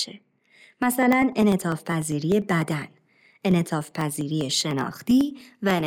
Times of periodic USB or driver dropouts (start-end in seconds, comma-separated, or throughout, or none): 0.13-5.80